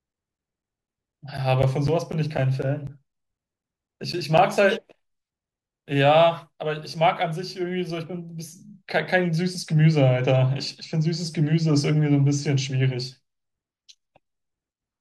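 From 0.13 to 4.39 s, periodic USB or driver dropouts recur every 0.25 s. Each gap drops roughly 10 ms to silence, heard as evenly spaced ticks over the speech.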